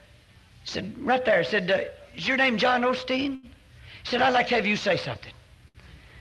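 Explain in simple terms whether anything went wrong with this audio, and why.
Two short stalls from a late packet, at about 3.35 to 3.46 s and 5.68 to 5.78 s. Each time a packet arrived late, so the receiver stretched the last bit of sound for roughly 70 ms until it caught up. Nothing's lost, just a brief hold with a faint buzz or dip.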